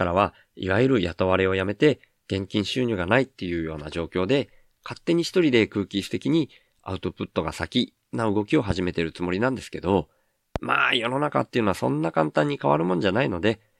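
At 10.56 to 10.58 s, a single loud pop sits well above the speech. It is likely a voltage pulse from a plug, switch or static discharge.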